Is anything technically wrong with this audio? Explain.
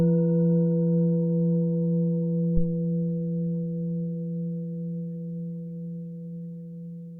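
Yes. At 2.57 to 2.68 s there is a phantom power thump: supply switching on a live input pushes a voltage step through the coupling capacitors, giving a deep thump peaking near -12 dBFS and decaying within 25 ms.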